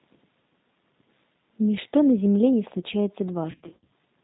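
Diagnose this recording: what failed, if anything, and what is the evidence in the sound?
G.729 codec damage, present throughout the clip, at the codec stage. Nothing above 4 kHz survives, and the speech has a rough, slightly synthetic edge. The roughness is plainly audible, consistent with an 8 kbit/s G.729A path. The decoder rebuilds each 10 ms frame from a vocal tract filter, a pitch predictor and a handful of pulses rather than the actual waveform, so fine detail is replaced by an approximation.

VoIP packet loss concealed by the speech codec, from 3.51 to 3.91 s, at the network stage with concealment in the decoder. Across that 400 ms span about 280 ms of audio is missing in scattered gaps, the longest around 60 ms, which points to roughly 28 lost frames. The decoder fills each gap by extrapolating from its last pitch and filter while lowering the gain. Because every frame builds on the previous one, the speech stays weak or distorted between gaps and just after them.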